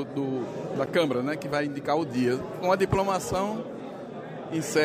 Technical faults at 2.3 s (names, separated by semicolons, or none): none